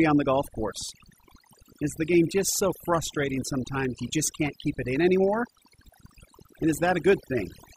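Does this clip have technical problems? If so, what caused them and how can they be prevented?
Yes. Overdone noise removal runs through the whole speech clip. A noise reduction stage set far too hard keeps pulling individual frequency bands down or shutting them off whenever they sit close to its noise estimate, and the softer parts of the voice get caught too. The pauses drop to near silence sprinkled with twinkling specks. Unlike a noise gate, which mutes everything at once, the damage here is band by band and continuous. It is prevented by using a gentler reduction setting and checking the voice for watery colouring before committing.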